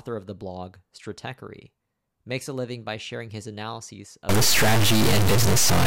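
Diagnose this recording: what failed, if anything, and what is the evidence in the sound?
Stuck bit from 4.29 s to the end: harsh buzz on the speech and noise-filled pauses, likely a broken converter data line forcing steps of about -15 dBFS.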